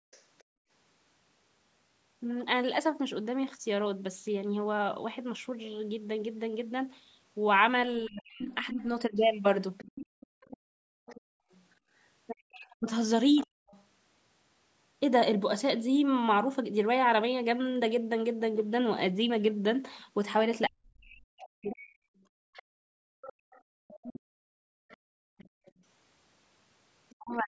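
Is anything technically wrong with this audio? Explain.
Yes. Three kinds of echo-canceller fault affect this speech recording, which has gone through call microphone processing with nothing above 8 kHz.

Background gated by the echo canceller occurs from 0.0 to 0.7 s, 10.06 to 11.91 s and 22.21 to 25.83 s. While the far end was playing over the loudspeaker, the canceller's suppressor pulled the microphone channel down by about 35 to 36 dB. The room tone drops out abruptly and comes back when the suppressor releases. This adds up to a few tenths of a second in the first stretch, roughly a second in the second, and around three seconds in the last.

The other side's voice leaking through appears as a faint second talker from 0.11 to 0.44 s, around 30 dB below the main speech, and over longer stretches from 8.05 to 13.84 s and 20.01 to 27.15 s, around 20 dB below. The likely cause is incomplete echo cancellation, which leaves part of the loudspeaker signal in the microphone path and sends it back out.

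Speech suppressed in double talk occurs from 8.07 to 9.13 s, 12.47 to 13.47 s, 20.67 to 21.93 s, and 27.14 s to the end. All four overlap the leak periods, while both sides are active. The canceller likely could not tell the near talker from the echo, so it attenuated everything. The main voice dips by roughly 40 dB, losing between a few tenths of a second and about a second in each stretch.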